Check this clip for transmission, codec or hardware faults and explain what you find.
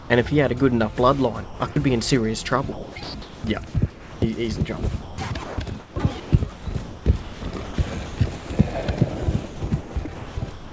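The clip shows signs of a voice detector with discontinuous transmission on a call path that runs out of bandwidth at 8 kHz, consistent with a 64 kbps G.722 codec.

From 0 to 0.10 s there is comfort noise in place of the background. The sender likely stopped transmitting and the receiver filled the gap with a steady, featureless synthetic noise, about 2 dB quieter than the real background.

The sound is chopped by the voice detector at 1.44 to 1.76 s, 2.72 to 4.22 s, 5.44 to 7.78 s, 8.06 to 8.50 s, and 9.46 s to the end. The detector likely switches on and off, so the sound cuts in and out. The longest of these stretches loses about 1.1 s in total.

From 5.02 to 5.18 s the sound is dropped by the voice detector. A quiet passage was likely taken for background and not sent, so about 0.14 s of sound gives way to steady comfort noise.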